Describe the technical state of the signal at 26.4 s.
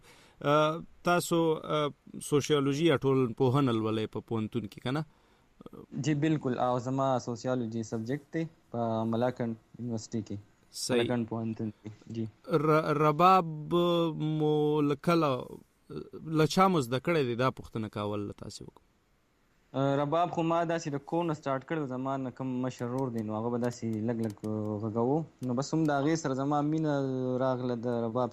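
At 26.4 s the signal is intact, with no audible technical fault at that moment.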